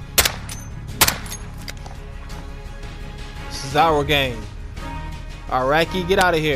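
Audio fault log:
0.18–0.26 s, 1.01–1.09 s and 6.21 s: integer overflow. Loud peaks exceed the largest integer value, by about 4 dB, 3 dB and 2 dB. Instead of being limited, they wrap to the opposite sign and jump across the full range. This produces violent cracks, far harsher than clipping.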